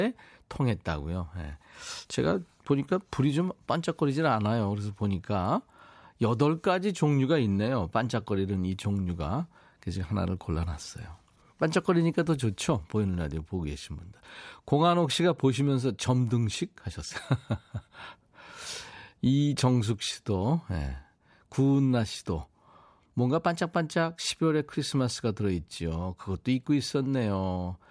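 Nothing in the speech stood out as a technical fault on listening.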